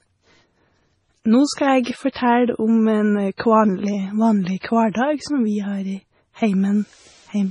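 From start to end the speech has a hard ceiling at 10.5 kHz, with a watery, swirling texture and metallic chirps on s sounds. This is most likely MP3 compression under heavy strain, which fits a bitrate near 24 kbps. Short of bits, the encoder cuts the top band and drops weak frequency lines that flicker in and out between frames. On a spectrogram, the energy stops at a flat horizontal edge, with scattered, blotchy holes below it.

Pre-echo appears at 1.54, 1.83, 2.12, 3.37, 4.59 and 4.91 s. Each time, a brief hiss runs ahead of a sharp onset, lasting between 27 and 46 ms, the longest at 4.59 s. The codec spreads its quantisation noise across a whole block, so noise sized for the loud attack also fills the quiet gap before it, leaving the attack soft and smeared. A waveform shows a faint fuzzy ramp before each onset, and a spectrogram shows a broadband smudge leading each vertical attack line.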